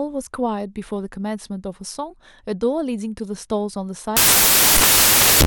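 From 4.17 s to the end, the samples are built from the wrong bytes: the reader misaligns or swaps the bytes within each sample, so the rapidly changing low bits become the dominant part of each value. The speech turns into loud, harsh broadband noise.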